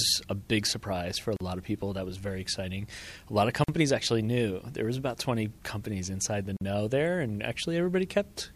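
The sound drops out three times, at 1.36 s, 3.64 s and 6.57 s. Each gap lasts about 40 to 46 ms, with smeared edges. These are gaps at a join of encoded pieces. Separately encoded sections were joined untrimmed, leaving encoder delay and end padding in place.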